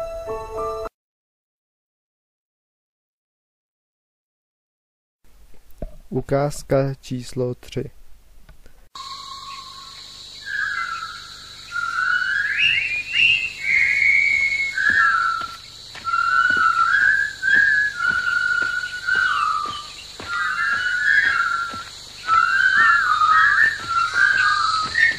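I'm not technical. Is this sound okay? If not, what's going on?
No, not quite. At about 16.33 s there's a tiny stutter from repeated frames: a sliver of sound about 46 ms long, which fits a single compressed frame, gets played twice in a row. That hiccup also makes the clip about 46 ms longer than it should be.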